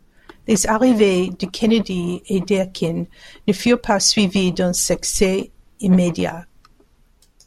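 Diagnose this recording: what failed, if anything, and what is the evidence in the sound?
Nothing in the recording points to a failure at any stage of the chain. The speech carries on without any event that would mark a fault.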